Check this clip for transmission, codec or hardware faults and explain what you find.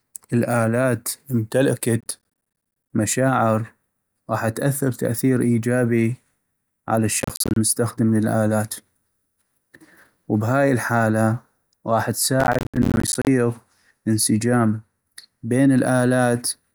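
Processor overload crackle occurs three times in the speech: 2.01 to 2.90 s, 7.20 to 7.56 s, and 12.40 to 13.27 s, just after "وبهاي الحالة غاح". The processor misses dozens of buffer deadlines, each roughly 10 ms, leaving hard-edged silent gaps. These gaps sound like gritty crackle over the voice.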